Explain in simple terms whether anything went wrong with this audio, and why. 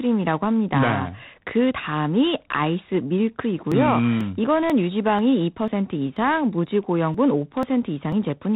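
The whole recording went through G.726 ADPCM telephone coding. It cuts everything above 3.9 kHz and adds a rough, rasping hiss that rises and falls with the speech.

From 3.72 to 8.12 seconds there are periodic USB or driver dropouts. About every half second, a tiny slice of sound is skipped. That causes about ten regular ticks.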